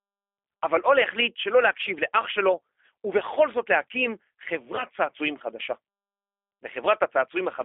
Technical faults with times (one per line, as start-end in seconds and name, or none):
0.00-7.64 G.729 codec
4.76-4.85 VoIP packet loss concealed by the speech codec